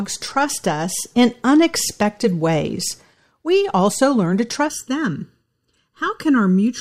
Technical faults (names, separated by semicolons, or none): channel delay (comb filtering)